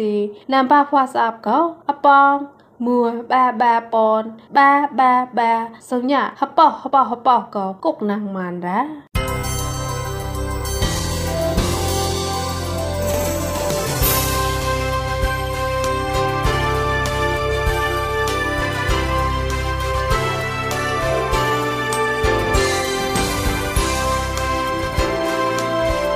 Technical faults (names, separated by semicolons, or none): none